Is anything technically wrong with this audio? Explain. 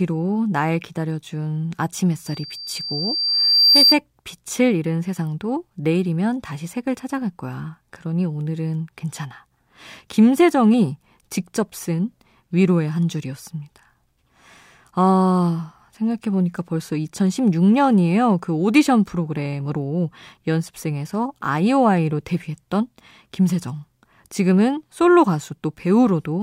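Yes. From 2.26 to 3.97 s there is loudspeaker feedback squeal. A microphone is picking up the loudspeaker it feeds, and at 4.7 kHz the gain around that loop climbs above one, so the tone keeps reinforcing itself on each pass. The result is a thin, piercing whistle that swells over roughly a second and a half until it sits about 5 dB above the speech, then stops.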